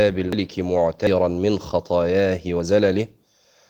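At 0.33 s, 1.07 s and 2.6 s the speech jumps forward with no gap, likely a dropped buffer (overrun): roughly 150 ms, 150 ms, then 50 ms of audio were overwritten before being read, so the surrounding sound splices together abruptly.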